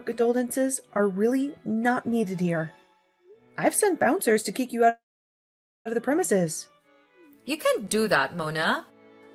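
A call audio freeze runs from 4.89 to 5.87 s. The last sound is held as a concealment tail that briefly carries on, fading, before giving way to about 0.87 s of silence. That behaviour likely comes from packets stalling in transit until the jitter buffer ran dry. When delivery resumes, the audio picks up exactly where it left off, so nothing is lost, but everything afterwards arrives roughly 0.96 s later than before.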